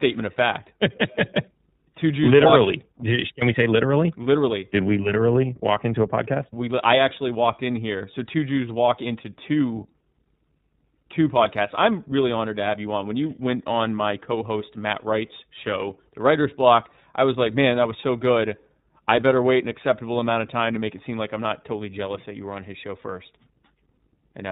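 Running under the whole thing there's mains hum, a steady low tone sitting at 50 Hz. That's the power line leaking into the signal, most likely through a ground loop or a nearby transformer. It isn't loud, roughly 35 dB down from the speech, and it hangs there as a faint, constant drone with a bit of low harmonic colour.

The speech has also clearly been through the iLBC codec, and the damage is easy to hear. Everything above 4 kHz is gone, so it has that narrowband telephone dullness, and the voice comes across slightly rough and synthetic, since each frame's excitation is rebuilt on its own. The frame rhythm and grain point to the 30 ms mode at around 13.3 kbps.

Then from 7.98 to 8.01 s there's a short patch of lost iLBC frames, a gap of about 30 ms, which fits a single dropped frame. The decoder papered over it by repeating the last pitch cycle mixed with some noise. You hear it as a brief held, faintly buzzy vowel-like smear. 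Because iLBC frames don't depend on each other, the voice snaps straight back afterwards with no lingering artefact.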